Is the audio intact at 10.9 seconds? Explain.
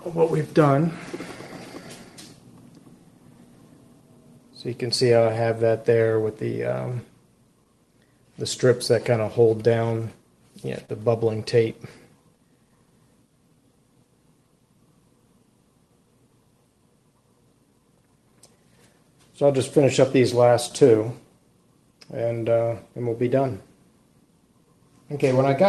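No. A short stall from a late packet runs from 10.85 to 10.89 s. The jitter buffer ran empty, so the receiver stretched the last sound by 30 ms, a brief hold with a slight buzz or dip, losing nothing. This sits within the clock drift between sender and receiver: the sender's clock runs about 2% slow, so the buffer keeps draining. The resulting repeated timing corrections, from 0.47 to 25.46 s, play at 98% speed, adding roughly half a second overall in small, unevenly spaced edits.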